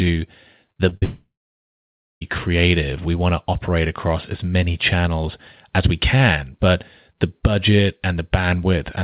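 From 0.72 to 1.04 s, repeated packet loss (robotic sound) chops the speech into choppy fragments: several short holes, the longest about 45 ms, patched with repeated sound. The waveform shows stuttering, repeated segments.

From 1.04 to 2.23 s, a long network dropout is the likely cause of the missing audio. A brief fading buzz or hiss gives way to nearly a second of silence, which shows as a flat waveform and an empty spectrogram band. All of this sits within the call path's 4 kHz ceiling.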